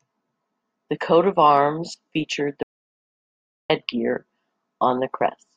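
At 2.63 s the speech cuts off mid-flow and resumes abruptly at 3.70 s: an audio dropout to silence lasting 1.07 s. The input was likely lost while silence kept being written. Unlike a natural pause or gate, the gap holds no room tone at all.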